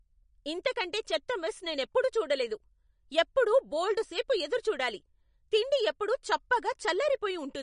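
Throughout, the speech sounds watery and smeared, with nothing above 10.6 kHz. This is likely MP3 compression at a low bitrate, dropping weak frequency lines.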